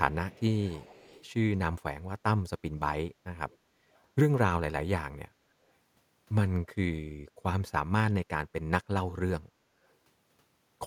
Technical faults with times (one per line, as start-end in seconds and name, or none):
0.30-1.25 echo leak
3.50-3.57 echo leak
3.94-4.02 echo leak